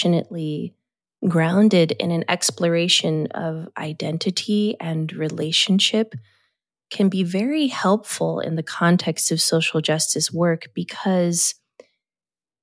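A speech recording with nothing technically wrong to report.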